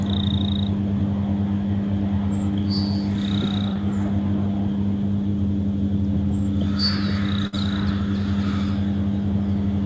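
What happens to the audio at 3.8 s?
From 3.73 to 3.77 s, just before 3.8 s, there is short concealed packet loss. About 20 ms of audio never reached the decoder in time. The receiver extended the preceding sound to fill it, then blended back. It is heard as a brief smear.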